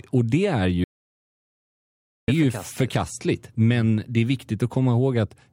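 From 0.84 to 2.28 s, right after "det är", an audio dropout to silence removes about 1.44 s of speech, likely a lost input. The waveform goes flat, and the spectrogram shows a blank gap.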